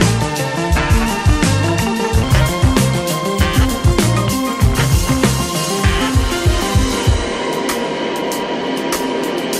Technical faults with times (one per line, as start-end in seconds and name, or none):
0.00-2.23 section at the wrong speed